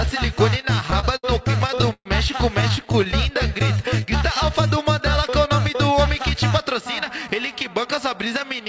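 Repeated stalls (stutter) run from 0.62 to 2.07 s and again from 2.61 to 3.14 s. Packets arrived late, so the jitter buffer kept running dry, and the receiver held the last sound through each wait. The first stretch has fifteen holds, the longest 123 ms, totalling 336 ms. The second has nine brief holds, totalling 89 ms. Nothing drops out, but the sound drags and stutters.

Jitter buffer slow-down follows from 3.31 to 4.18 s. To rebuild its reserve, the receiver repeated single pitch periods many times, adding 86 ms. The passage plays at 91% speed with unchanged pitch, so sounds are drawn out.

Jitter buffer speed-up occurs from 6.19 to 6.82 s and from 7.27 to 8.01 s. Here the buffer held too much audio, so the receiver trimmed short pitch-period pieces, around 50 ms in each stretch. Both play at 106% speed, at the same pitch, and sound slightly hurried. Throughout, nothing is heard above 8 kHz, which fits a wideband G.722 call path.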